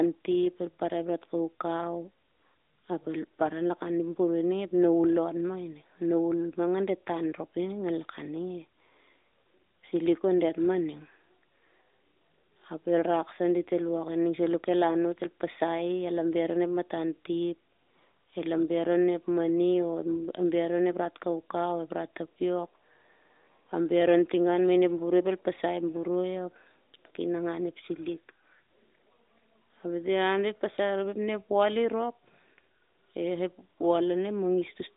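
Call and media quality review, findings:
No defects found in the speech: no dropouts, clicks, distortion or level problems observed, and nothing requiring action.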